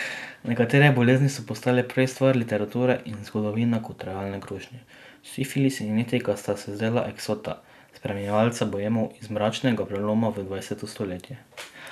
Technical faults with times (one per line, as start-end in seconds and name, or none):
none